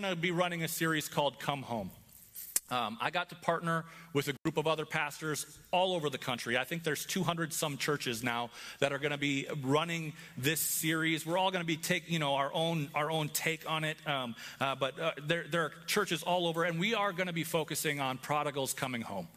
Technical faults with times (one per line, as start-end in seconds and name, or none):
4.34-4.48 intermittent contact